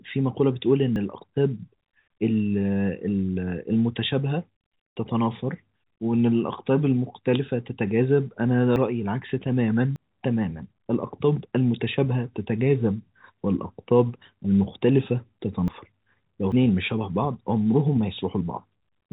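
The capture program likely failed to collect its samples before the hardware overwrote them. That is a dropped buffer (overrun), and each one splices the speech together with no gap. Forward jumps come at 0.96, 8.76, 9.96, 15.68 and 16.52 s, losing roughly 40 ms early on and up to about a tenth of a second at the last.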